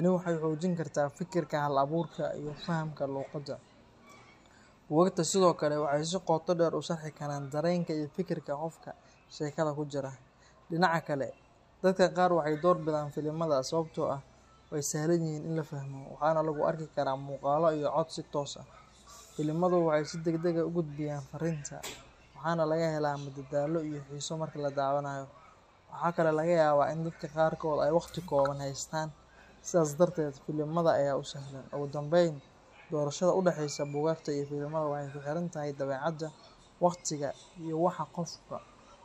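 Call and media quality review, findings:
No faults heard in this speech clip; nothing to attribute to any component.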